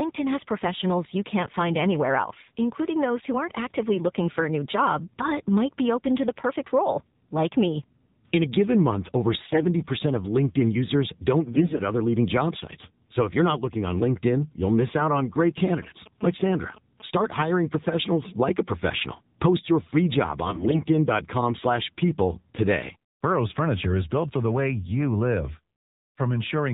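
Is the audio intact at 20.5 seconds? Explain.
No. From 20.46 to 20.81 s there's a burst of AMR bit errors: flipped bits misplace the pulses and nudge pitch and gain, so the speech turns hoarse, scratchy and gargly. Underneath, the AMR narrowband mobile codec is plainly audible too: nothing above 4 kHz, and a buzzy, synthetic edge that fits the 7.4 kbps mode.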